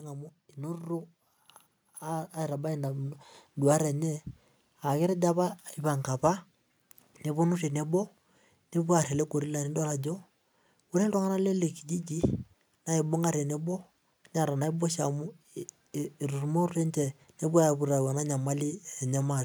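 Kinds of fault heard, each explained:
Automatic gain rising: the speech and the background around it swell together from 0.55 to 4.29 s, climbing by about 9 dB. This is gain control judging the input too quiet and turning it up step by step rather than at once.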